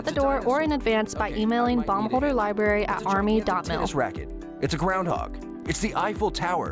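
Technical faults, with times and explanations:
Throughout, resampler restarted on every block: a regular ticking at 10 Hz rides on the sound whenever signal is present. The conversion from 48 kHz to 16 kHz treated each 100 ms block in isolation, so every block edge was computed without its true neighbouring samples and carries a small error.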